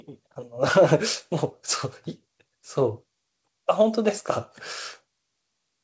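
Speech over a call path; no technical faults heard.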